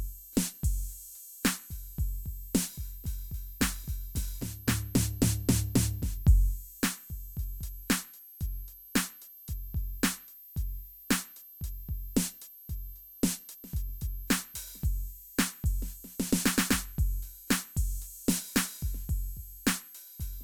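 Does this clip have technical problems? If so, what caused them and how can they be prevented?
Yes. A switching power supply in the chain is running in an audible burst mode or beating with another supply, so its switching lands in the hearing range. Throughout the music this appears as a switching supply whistle, a thin high tone wandering between about 12.2 kHz and 12.5 kHz as the supply's load shifts, sitting roughly 20 dB below the music. Powering the equipment from a linear or well-filtered supply, away from audio lines, prevents it.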